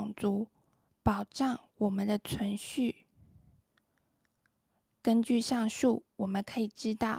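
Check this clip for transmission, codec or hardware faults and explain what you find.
Nothing in this speech recording points to a fault anywhere along the chain that carried it. There is nothing to report at any point in the clip.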